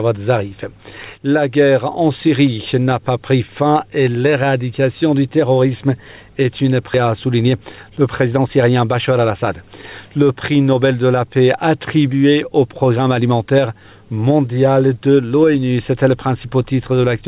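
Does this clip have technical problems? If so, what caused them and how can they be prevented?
Yes. At 6.94 to 6.96 s there is a skip ahead: about 0.7 s of audio is missing and the two sides are spliced together with no fill. Later audio was already queued, so the lost or overflowed stretch was dropped and playback jumped forward. Reducing packet loss and giving the jitter buffer enough headroom to absorb bursts without overflowing would prevent this.

From 7.04 to 9.37 s, a jitter buffer speed-up runs the audio at about 110% speed with unchanged pitch, so it sounds hurried. The buffer had filled beyond its target after delayed packets arrived in a bunch. To shed the excess, the receiver repeatedly removed short pitch-period pieces, about a fifth of a second in total. Smoothing network delay, so packets don't arrive in clumps, would keep the buffer from overfilling and avoid this catch-up.

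The call path limits the audio to nothing above 4 kHz, which fits G.711 A-law at 64 kbps.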